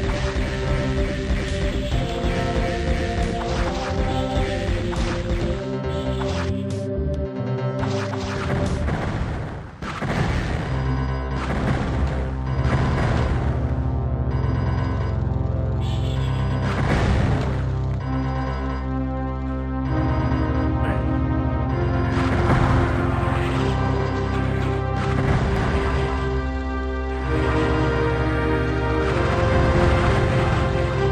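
From 25.56 s to 30.16 s every sound is followed by an identical second copy arriving about a fifth of a second later, at roughly the same loudness, so the audio turns into a hard, clattering slapback. The repeat has no decay or room colour, and it switches on and off abruptly at those points. This is a doubled audio track, most likely the same signal reaching the mix twice, with one path running about 200 ms late.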